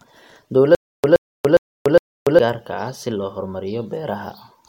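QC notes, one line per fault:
0.75–2.39 s, stutter with silent gaps: a 121 ms fragment repeats four times every 409 ms with 288 ms of digital silence between, likely a stalled stream retrying.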